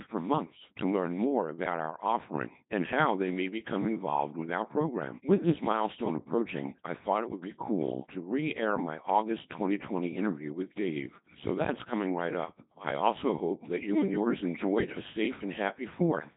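The speech in this clip has passed through the Codec 2 vocoder for its whole length, at a setting whose heavy damage fits the 2.4 kbit/s mode. Rather than carrying the waveform, the codec transmits only pitch, voicing, energy and a coarse spectral envelope, and the decoder rebuilds the voice from a bank of sine waves. The result sounds robotic and buzzy, with heavily smeared detail, and nothing survives above 3.8 kHz, leaving the sound dull and band-limited.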